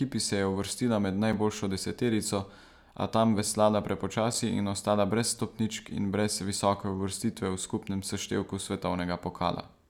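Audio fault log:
1.33, 4.34 and 7.34 s, gap between chunks: the speech drops out for about 6.5 ms right before "deseterico a tam veslala", again just ahead of "in ostala brez stopničk", and once more at 7.34 s. These are hard-edged holes every 3 s where the audio chunks join. Nothing's missing, but each join leaves a brief silence.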